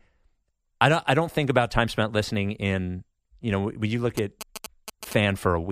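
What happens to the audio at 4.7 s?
At 4.7 s you're in the middle of GSM signalling bursts, running from about 4.17 to 5.13 s under the speech. It's a galloping dit-dit-dit of short buzzes repeating at about 217 Hz, sitting roughly 10 dB below the speech. That points to a 2G phone nearby sending brief groups of radio bursts while signalling, which the audio circuitry rectifies into audible clicks and buzz.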